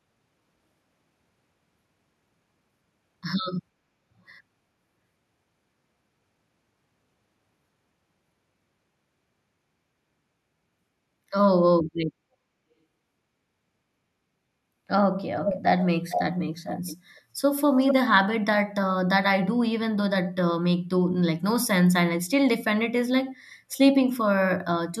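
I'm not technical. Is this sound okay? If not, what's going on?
No. There is an echo leak at 15.44–15.61 s, 16.09–16.24 s, 16.64–16.96 s and 17.8–17.94 s: scraps of the speech come back almost half a second late. The likely cause is a speakerphone whose echo cancelling let some sound through. Unlike room reverberation, the repeat is a separate, distinct copy rather than a smeared tail.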